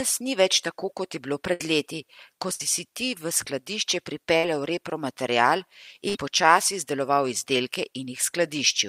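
Burst of packet loss in this speech at 1.53, 2.53, 4.37 and 6.09 s (after "tako kot je bilo", "leti ko", "si ti v skladišče"): each time about 60 ms vanishes, bridged by a fading continuation of the preceding sound.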